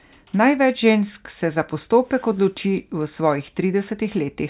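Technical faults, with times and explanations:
Nothing technical stands out here: the speech comes through without any dropouts, glitches or other faults to report.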